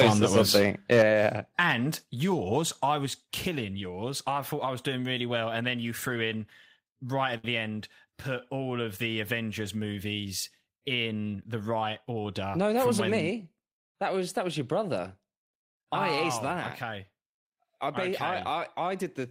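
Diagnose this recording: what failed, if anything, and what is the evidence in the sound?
Microphone overload, at the converter. From the start of the speech to 1.02 s the loudest syllables carry a harsh, crackling edge. Peaks exceed full scale by about 5 dB, flattening the tops of a couple of percent of samples. The likely cause is an input gain set too high ahead of the analogue-to-digital converter, which squares off any waveform above its ceiling and adds broadband distortion to each peak.

Microphone volume stepped down, in call processing. The level of speech and background drops abruptly at 1.02 s, by about 5 dB, immediately after the overloaded opening. A second drop of about 3 dB follows at 2.04 s, just before "yours I". Each change happens in a single step rather than as a gradual fade, which fits automatic gain control likely reacting to the clipping by lowering the device's input volume in discrete increments.

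Short stall from a late packet, at the network and receive buffer. Between 7.37 and 7.45 s, after "threw in right at" and before "the end put all", a sound is held unnaturally long, with a slight buzz or dip. The receiver filled 62 ms by stretching the last audio while the jitter buffer sat empty, then resumed where it had stopped. No audio is lost, but playback delay grows by 62 ms.

Jitter buffer speed-up, in the receive buffer. From 12.09 to 12.77 s, right after "movies in the right", the speech sounds hurried while its pitch stays the same. Playback runs at about 109% speed. The receiver trimmed roughly 70 ms in total by removing short pitch-period segments many times in a row, draining excess buffered audio to bring latency back down.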